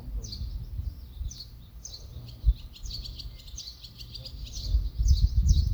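A short recording of everyday sounds with nothing technically wrong to point at anywhere along the way.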